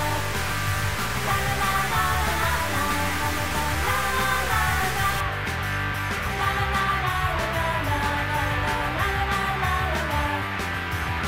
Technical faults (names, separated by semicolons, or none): stuck bit